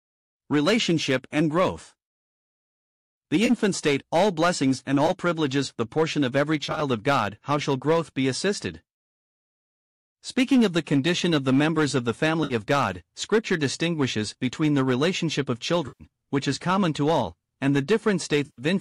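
AAC frame loss with concealment: parts of the stream went missing, and the decoder filled each gap from its last good spectrum. This happened at 3.46 s (30 ms), 5.07 s (20 ms), 6.65 to 6.82 s (scattered losses, longest run about 30 ms), 12.44 s (60 ms), 15.88 s (120 ms) and 18.46 s (120 ms). Each one is heard as a brief smeared, noisy, phasey patch. The gap lengths fit the 10 ms frames of the likely low-delay AAC (AAC-ELD) coding.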